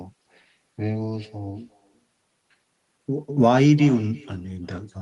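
Throughout the speech, an echo with no canceller trails every phrase. The far end's loudspeaker feeds its microphone, returning the talker about 24 dB down and around 0.4 s late, thin. Spectrograms show faint, delayed copies of each syllable's harmonics.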